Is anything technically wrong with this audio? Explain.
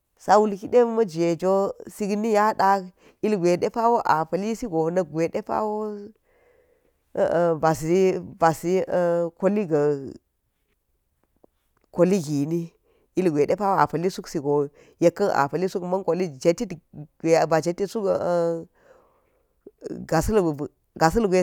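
No, nothing technically wrong can be heard in this speech recording.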